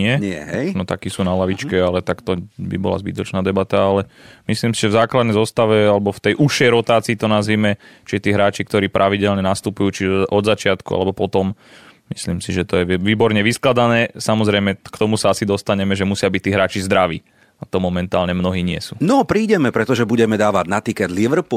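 At 5.84 to 5.87 s, a corrupt frame decoded: damaged bits in a single compressed frame were played anyway, throwing energy to wrong frequencies as a brief chirp, squeak, blip or burst of noise peaking around -25 dBFS.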